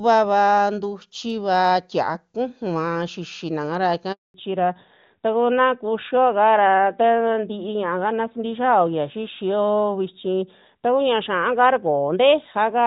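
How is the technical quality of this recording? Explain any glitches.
The recording has two linked faults in the middle of the call: a short dropout, after which the speech stays narrower for the rest of the clip. Before that point the wideband HD Voice sound is clear.

Handover gap, 4.12 to 4.34 s: The phone switched networks and no speech frames arrived during the change. The voice fades within a few tens of milliseconds into about 220 ms of clean silence. Packet-loss concealment would fill the hole with smeared or repeated sound. Here the sound stops until the new link begins.

Fallback to narrowband, 4.34 s to the end: Right after that gap, the call drops from AMR-WB to the older narrowband AMR codec, which fits a 12.2 kbit/s mode. Nothing above 4 kHz survives, so the voice loses its airy top and sounds duller and rougher. A simple filter or EQ change would only dull the tone. This change happens exactly at the handover and also adds the coarser narrowband codec texture.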